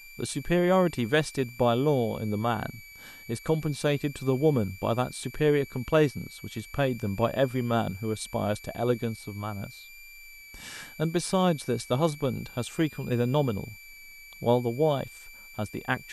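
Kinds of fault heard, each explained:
switching supply whistle: A switching power supply feeding the recording chain is cycling at an audible rate, or beating against a second supply, and that switching leaks into the audio path. Throughout this speech clip it leaves a thin, high whistle that wanders between about 2.3 and 2.4 kHz as the supply's load shifts. It sits roughly 20 dB below the speech.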